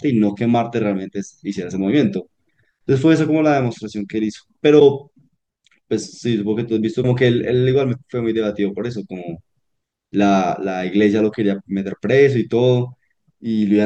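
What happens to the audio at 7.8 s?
Nothing goes wrong at 7.8 s: the audio carries straight through that point with no dropout, click, distortion or other fault.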